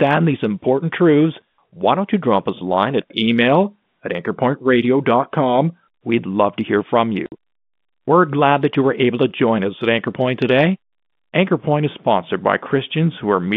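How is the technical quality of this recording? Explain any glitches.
The recording has one clear glitch, heard over telephone-band G.711 audio with nothing above about 3.6 kHz. Packet loss filled with silence occurs from 7.26 to 7.32 s, just after "love to hear from": about 60 ms of audio is missing, which fits two lost 30 ms packets. The receiver played silence in their place, so the sound drops out abruptly, with hard edges on the gap.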